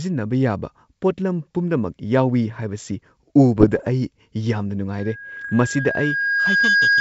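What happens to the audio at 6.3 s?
At 6.3 s the audio is inside a loudspeaker feedback squeal that runs from 4.98 s to the end of the clip at 7.01 s. A microphone is picking up the loudspeaker it drives, and at 1.6 kHz the loop gain exceeds one, so that frequency reinforces itself on each pass. It swells over roughly a second and a half into a sustained whistle that sits a few dB above the speech, and it is still sounding when the clip ends.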